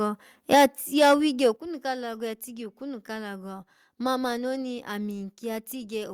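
At 0.52 to 0.66 s, 1.01 to 1.14 s and 1.44 to 1.46 s the loudest syllables crackle harshly. Peaks run about 7, 5 and 1 dB past the limit, flattening roughly a fifth, 15 percent and a small share of samples. This is microphone overload, likely from input volume set too high, and it adds grit without lowering the level. At 0.55 s, 1.56 s and 4.62 s the voice and background drop together by about 3, 7 and 1 dB. This is microphone volume stepped down, likely the call software reacting to clipping, and it makes the sound abruptly quieter without adding distortion.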